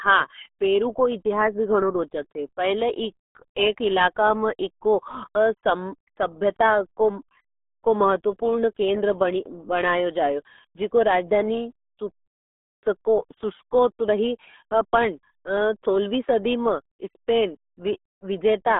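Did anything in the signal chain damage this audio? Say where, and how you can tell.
Yes, at the codec stage: the speech went through the RealAudio 14.4 codec for its whole length. Nothing survives above about 3.8 kHz, the band sits roughly between 250 Hz and 3.6 kHz, and the heavy muffled, gargly smearing fits an 8 kbit/s dial-up speech coder discarding most of the signal.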